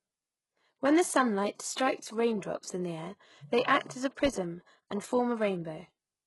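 The speech was likely squeezed through HE-AAC compression at a very low bitrate, with damage that fits something near 12 kbps. Its treble is rebuilt from copied lower bands, so sibilants sound gritty and metallic throughout, and nothing remains above 11.5 kHz.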